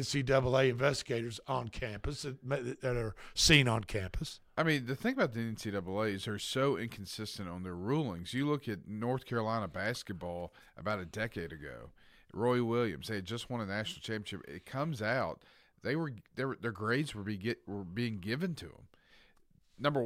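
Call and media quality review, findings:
Nothing to flag on this speech recording, as no faults turned up anywhere in the review.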